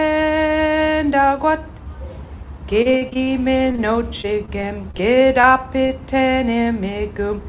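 The audio passes through a narrowband call path with nothing above 4 kHz, which fits G.711 mu-law at 64 kbps. Repeated packet loss gives a choppy, robotic sound from 2.82 to 3.32 s and from 4.21 to 5.45 s. Packets kept going missing. Each hole was patched by extending the last sound. The first stretch has seven gaps, up to 40 ms long. The second has nine shorter ones. A short concealed packet loss at 3.72 to 3.76 s leaves a brief smear where about 20 ms was rebuilt. A short stall from a late packet follows at 3.76 to 3.94 s, and another comes at 5.87 to 5.91 s. Each time, the jitter buffer ran dry and the last sound was held for about 20 ms. Nothing is lost in these stalls.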